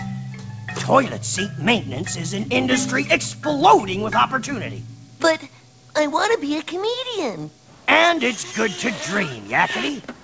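No technical faults can be heard in this clip. It has passed through a call path whose wideband codec leaves nothing above 8 kHz, which fits G.722 at its standard rate.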